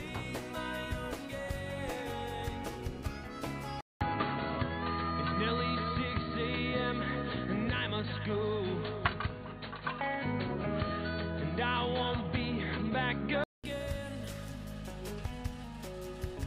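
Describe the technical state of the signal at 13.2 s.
At 13.2 s the audio sounds dull and boxy, with nothing above 4.5 kHz, a shifted level and a new noise floor well below the signal. This is likely an input switched to a poorer device, running 3.81–13.64 s after a 200 ms silence.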